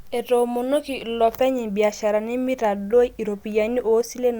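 The speech recording has no audible technical faults anywhere in the signal.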